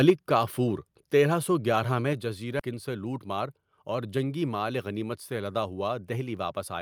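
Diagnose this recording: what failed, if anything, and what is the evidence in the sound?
Microphone overload, 0.08 to 0.10 s: the peak crackles harshly with flattened tops, about 3 dB over full scale and around a fifth of samples clipped, likely from converter input gain set too high.

Microphone volume stepped down at 0.10 s and 2.13 s: sound and background drop abruptly by about 3 dB, then about 4 dB, from call processing that is likely reacting to the clipping by lowering device input gain.

Skip ahead, 2.59 to 2.61 s: playback jumps forward with no gap, losing roughly 0.7 s of sound. This is a network or jitter-buffer discard of audio while later audio had already arrived.

Jitter buffer speed-up, 3.17 to 3.47 s: the sound runs hurried at 109% speed with unchanged pitch, as the receiver trims short pitch-period pieces, about 40 ms in total, to shrink the buffer delay.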